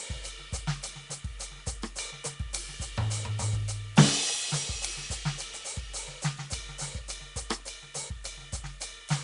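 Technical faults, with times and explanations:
Throughout, Nellymoser compression: the music carries a rough, hissy halo and a smeared, watery feel, with nothing above 10.6 kHz. It's likely the old Flash codec, Nellymoser Asao, at a rate fitting 44 kbps, starving weak bands of bits and filling them with noise.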